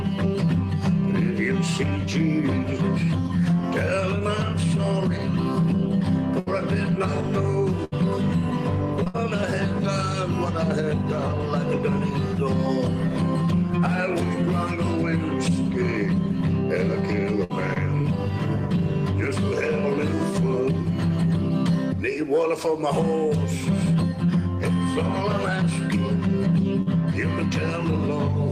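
Bursts of packet loss occur at 6.39–6.48 s and 7.84–7.94 s, each dropping about 80 ms. The receiver extends the last sound and fades it, so a spectrogram shows smeared, frozen bands dimming before the audio resumes with a jump. Short concealed packet loss then occurs at 9.04–9.08 s, about 20 ms bridged by synthetic continuation. It sounds like a brief smear or wobble and shows as a thin smudged column. It runs straight into another burst at 9.08–9.16 s (60 ms missing). Further bursts follow at 17.44–17.52 s (60 ms) and 26.82–26.88 s (40 ms). Between them, short concealed losses at 17.74–17.78 s and 18.02–18.06 s briefly blur the waveform's envelope.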